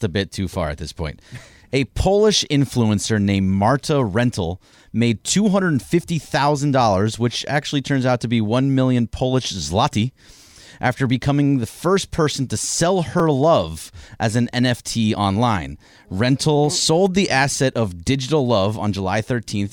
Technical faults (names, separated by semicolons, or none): repeated buffer